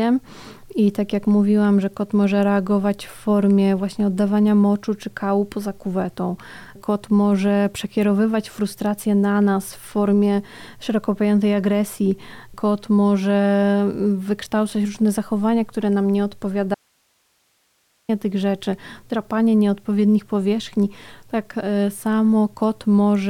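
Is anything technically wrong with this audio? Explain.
Yes. Audio dropout to a faint residue, 16.75 to 18.09 s: the signal was likely lost while the path stayed live, so sound abruptly gives way to hiss for 1.34 s.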